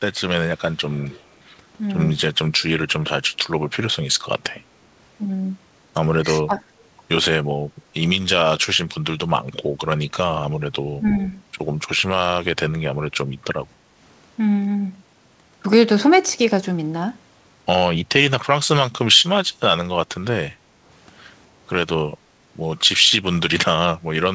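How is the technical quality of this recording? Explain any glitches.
The recording has two recurring call-processing faults, an echo leak and speech suppressed during double talk. The speech is band-limited, with nothing above 8 kHz, which fits a G.722 call codec at 64 kbps.

Echo leak occurs at 0.71–1.33 s, 6.79–6.84 s and 11.15–11.27 s. A faint copy of the speech returns 272 ms late, very quiet in the middle event and clearer in the last. The likely cause is a far-end loudspeaker whose echo canceller let some pickup through. The fixed delay marks it as echo rather than reverberation.

Speech suppressed in double talk occurs at 6.46–6.61 s and 11.01–11.06 s. The speech dips by roughly 15 dB in the first event and only slightly in the second, lasting about 150 ms and 50 ms. Two people talking at once likely made the canceller duck both its own talker and the loudspeaker echo. Unlike a network dropout, the level dips instead of vanishing completely.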